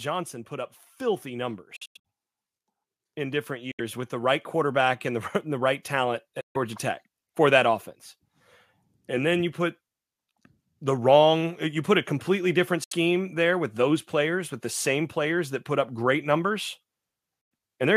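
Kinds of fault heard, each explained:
automatic gain rising: The level of the speech and the background noise beneath it climbs together, slowly and steadily, from about 0.48 s to about 11.98 s, ending about 9 dB louder than it began. The automatic gain control judged the input too quiet and kept nudging its gain upward across that span. Because the whole signal is amplified, the room noise grows just as much as the voice does.
Bluetooth dropout: The speech cuts out abruptly into short silent holes and then comes back further along, as if it had kept playing through the gap. This happens at about 1.76 s, where several short gaps are scattered over roughly 0.28 s with the longest near 93 ms, and again at 3.71 s, 6.41 s, 12.84 s and 17.41 s, each gap lasting roughly 70 to 140 ms. The likely cause is audio packets failing to reach the headphones in time, so the output fell silent until good ones arrived.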